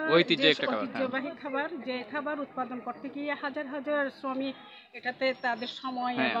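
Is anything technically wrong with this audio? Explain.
No, nothing technically wrong can be heard in this audio. The sound continues without any audible break, glitch or distortion.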